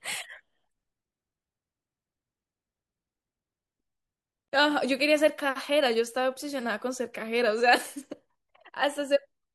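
At 4.48 s the speech cuts to 40 ms of silence and resumes mid-flow: a gap at a join of encoded pieces, from untrimmed encoder delay and padding.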